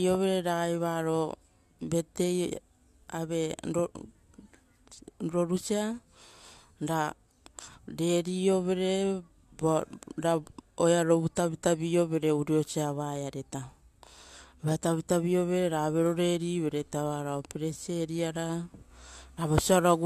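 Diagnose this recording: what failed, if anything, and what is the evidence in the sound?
Nothing failed; no fault is audible anywhere.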